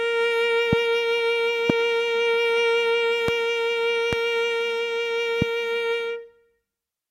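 Sharp single pops cut through the music at 0.73–0.75, 1.70–1.72, 3.28–3.31, 4.13–4.15 and 5.42–5.44 s, each loud pop jumping well above the music, which carries on underneath. Each is likely a brief voltage spike from static, a switch or a driver glitch.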